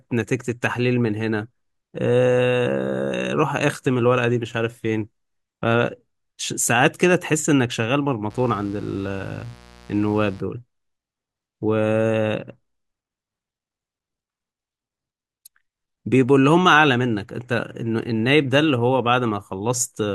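From 8.30 to 10.40 s a mains buzz sits well below the speech: 60 Hz switching spikes spray harmonics into kilohertz, sounding raspy rather than like a smooth low hum.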